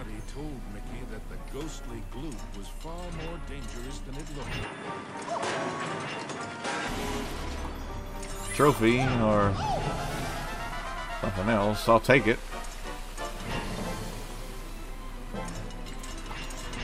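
The audio narrows in bandwidth from 4.63 s to 6.88 s, with nothing above 10.6 kHz during that span, and then returns to its full range. There is no gap at either transition and no obvious level jump. A new noise floor appears, sitting around 50 dB below the signal. The likely cause is the input switched to a poorer device, a different microphone or headset path with its own narrower response and background noise.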